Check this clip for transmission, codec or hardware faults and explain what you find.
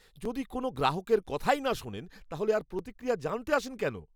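There's one fault here, and it's a steady one: overlapping chunks throughout the speech. You hear it at 0.25, 0.76, 1.27, 1.78, 2.28, 2.79, 3.30 and 3.80 s, once every half second, including the join between "যদি কোনও" and "গ্রাহকের কথাই না শোনেন". Each 0.5 s block begins about 7 ms before the previous one finished, so that sliver plays twice at every seam. It comes across as an evenly spaced click or stutter.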